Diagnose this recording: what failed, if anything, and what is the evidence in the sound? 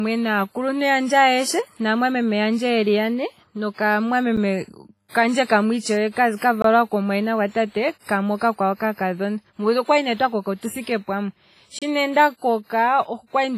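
The speech sounds washy and ringing throughout, with a hiss that swells and fades along with the voice, and nothing is present above 15.3 kHz. This is heavy codec damage, most likely from WMA compression at a low bitrate, which fits something around 24 kbps. At that rate the transform encoder spreads its quantisation noise over long blocks, smearing it around each syllable, and discards weak spectral detail. The stage at fault is the codec.

There are three abrupt dropouts to digital silence. There is a tick at 4.37 s lasting about 8.5 ms, a short hole from 6.62 to 6.64 s (about 21 ms, just before "komumwayina gwatate"), and another from 11.79 to 11.82 s (about 28 ms). These are blocks of digital silence. Most likely the output buffer went unfilled and was sent out as zeros, with no fade at either edge. The 21 ms gap fits a 1024-sample buffer, which points to the driver or buffer stage.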